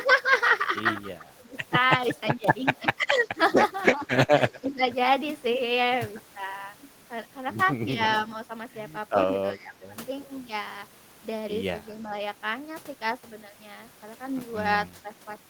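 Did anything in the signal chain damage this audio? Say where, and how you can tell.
Yes, in call processing. Speech dips by up to about 20 dB at 1.2–1.53, 2.36–2.47, 2.82–3.27, 3.93–4.82 and 9.26–9.94 s. This is likely speech suppressed in double talk: the echo canceller mistook this talker for loudspeaker echo and turned the speech down.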